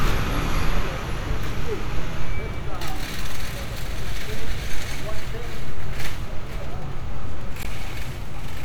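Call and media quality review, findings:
Damaged data in compressed stream at 7.62–7.66 s: short glitch. Decoder hit corrupt frames, lost sync, jumped to next valid header.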